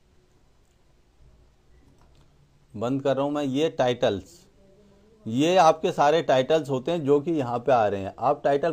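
Nothing here stands out as a technical problem; the audio just runs along without any glitch, dropout or odd artefact catching the ear.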